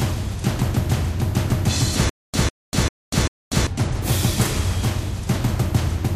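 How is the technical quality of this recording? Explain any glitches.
The recording has one glitch, a stutter with silent gaps from 2.09 to 3.67 s. A 150 ms burst of sound repeats four times, each followed by 243 ms of dead digital silence, so it returns every 393 ms. This is likely a playback or stream stall, with each retry replaying the last fragment and then running dry. The audio that belonged in that stretch is lost.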